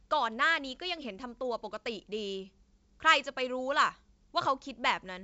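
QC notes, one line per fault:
The speech comes through G.722 wideband telephone coding, with its band reaching about 7.7 kHz and nothing above it, which fits the full 64 kbit/s mode.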